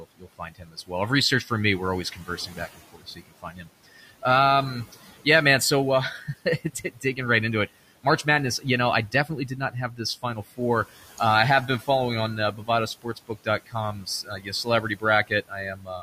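Word endings and soft consonants sound swallowed, turning faint, from 0 to 0.91 s, 2.12 to 4.23 s after "for me we're always", 6.17 to 7.18 s, 9.12 to 11.2 s after "know I", 11.67 to 11.88 s, 12.52 to 12.69 s after "on uh", and 13.02 s to the end. This is speech cut by the noise suppressor. It mistook quiet parts of the speech for the room noise, which sits about 20 dB below the speech. It turned them down by about 12 to 18 dB, most deeply at the start and end, over roughly a tenth of a second to a second within each stretch.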